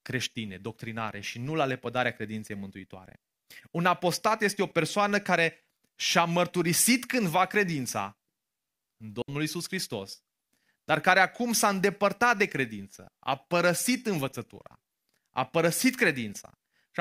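Speech recording with a digital wireless dropout at 9.22 to 9.28 s: the receiver mutes for about 65 ms, leaving a clean near-silent hole without any noise burst.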